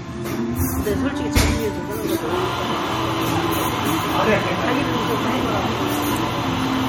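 The clip is everyday sound with plainly audible MP3 compression throughout, likely at around 45 kbps. Nothing above 18.6 kHz survives. Weak detail swirls and chirps metallically.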